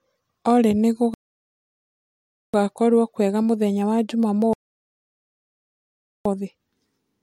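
Rebuffering stalls at 1.14–2.54 s and 4.53–6.25 s: playback starves, the speech drops to dead silence for 1.4 s and 1.7 s, then resumes exactly where it stopped, shown as flat, empty gaps on waveform and spectrogram.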